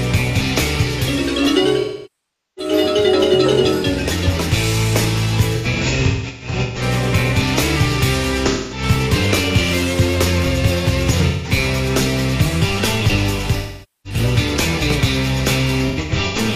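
AAC frame loss with concealment occurs six times: 1.80–2.72 s, 5.56–6.82 s, 8.47–8.82 s, 11.28–11.51 s, 13.58–14.20 s and 15.88–16.38 s. Each time the decoder lost frames and rebuilt the gap from the last good spectrum. The long loss near 1.8 s smears and sinks toward silence before fading back. The brief ones sound like short, noisy, phasey blurs. At 5.56 s and 15.88 s the losses are scattered, giving broken runs of smeared patches up to about 150 ms and 100 ms.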